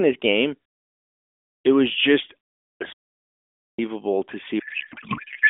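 From 4.60 s to the end, a codec payload misread: octet-aligned AMR frames are parsed as bandwidth-efficient, so the narrowband speech collapses into garbled, warbling noise that barely tracks it.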